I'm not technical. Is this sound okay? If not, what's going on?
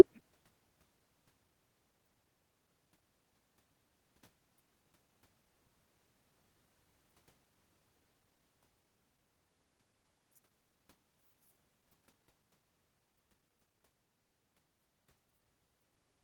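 Yes, no faults here.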